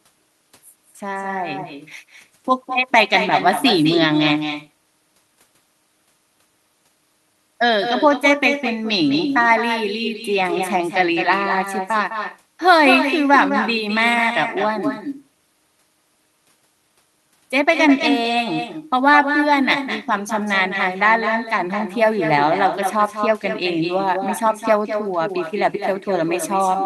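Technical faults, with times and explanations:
Throughout, echo with no canceller: speech returns roughly 0.2 s later, about 7 dB quieter and thinner, as the far loudspeaker leaks back uncancelled.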